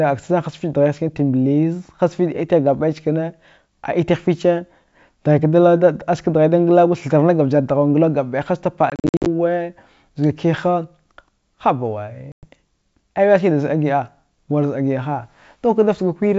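Hard-edged silent gaps chop the speech between 8.90 and 9.27 s, with about 220 ms missing in runs of up to 50 ms, and again from 12.32 to 12.46 s, where about 110 ms drops out. Each time the speech comes back slightly distorted before settling. This is packet loss on an ADPCM call: the gaps leave the decoder's predictor and step size out of step with the sender's.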